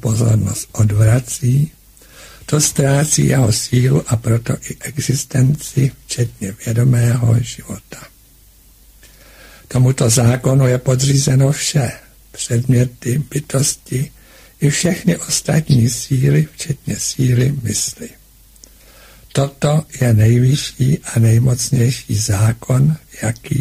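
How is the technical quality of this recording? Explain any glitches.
No glitches or technical faults can be heard anywhere.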